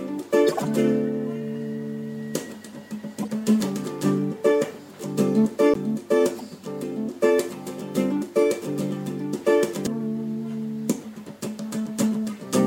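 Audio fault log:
0.47–0.66 s, 3.22–3.29 s, 6.38–6.41 s: corrupt frame decoded. Each is a chirpy burst of misplaced noise. The first is the longest and loudest, the last the shortest and faintest. Damaged compressed frames were played anyway, so misread codes scattered energy across wrong frequencies.
5.74 s, 9.87 s: CD skip. Each is a tick on a very brief mute, about 15 ms and 3 ms, then an abrupt jump. A disturbance knocked the laser onto another turn of the spiral, so playback resumed from a different point.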